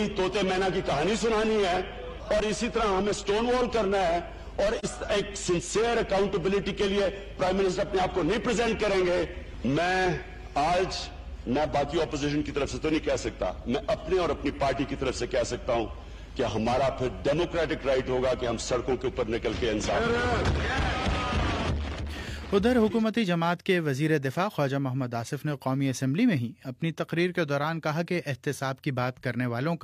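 At 4.79 s the decoder lost an AAC frame and, with no data to use, set its spectrum to zero: AAC frame loss with muting. The overlapping windows fade the sound out and back in by 4.85 s, leaving a brief 43 ms dip, consistent with a single missing frame.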